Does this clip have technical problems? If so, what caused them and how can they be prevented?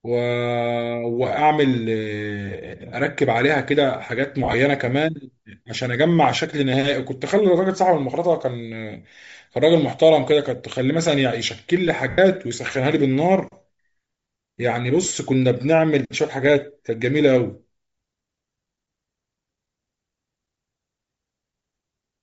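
Yes. Bluetooth LC3 compression is audible throughout the speech: the upper spectrum sounds thinned and replaced by a grainy, breathy hiss, and the voice has a rough edge. This is likely the LC3 codec of Bluetooth LE Audio running at a low bitrate, which fits roughly 32 kbps with 10 ms frames. At that rate the encoder discards much of the high band and the decoder fills the gaps with noise. Prevent it by choosing a higher LC3 bitrate profile or a wired or higher-quality link.

Lost LE Audio frames occur at 4.44 to 4.54 s, 12.10 to 12.18 s and 15.05 to 15.15 s. The first and third dropouts total about 60 ms each, scattered over 100 ms in short runs of a few tens of milliseconds. The second is a continuous 80 ms gap. In each one the decoder repeats the last spectrum with scrambled phase, so the sound smears into noise instead of cutting out cleanly. Prevent it by reducing radio interference and distance, or by allowing more retransmission headroom.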